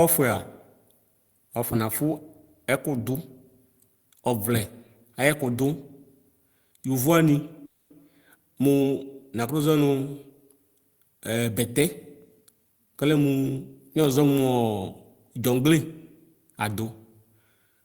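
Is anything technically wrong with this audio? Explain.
Yes, there are two faults.

From 7.65 to 7.92 s there is a call audio freeze, likely from packets stalling in transit until the jitter buffer emptied. The receiver stretched the last sound into a fading buzz for roughly 250 ms, then fell silent for about 70 ms before the speech resumed where it stopped. Nothing is lost, but the audio is now 250 ms later. On a spectrogram it shows as a smeared, frozen harmonic band that fades into a blank strip. The waveform shows a decaying repetitive stretch followed by flat silence.

From 12.17 to 13.98 s a jitter buffer speed-up plays the speech at 114% speed. To shed excess buffered delay, the receiver cut out short pitch-period-length pieces many times in a row, removing roughly a third of a second in total. The pitch is unchanged, but the speech sounds hurried. On a spectrogram, harmonic spacing stays the same while syllables and transitions are compressed in time. 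The waveform envelope looks squeezed.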